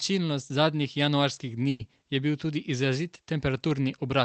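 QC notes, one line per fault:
1.69–1.81 s, burst of packet loss: about 100 ms of audio never arrived, so the receiver stretched the last sound and faded it rather than going silent, then resumed further along with that stretch gone. The filled-in gap, not a hard mute, sets it apart from a dropout.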